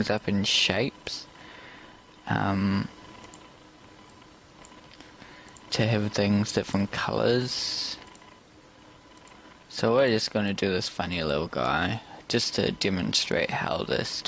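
Gain pumping runs through the whole clip. The gain swings by around 5 dB, leaving the dynamics squashed. The likely cause is an input gain set far too high for the microphone, with a fast limiter or compressor pulling it back on each peak. The audio shows call microphone processing, with the lowest bass filtered out and nothing above 8 kHz.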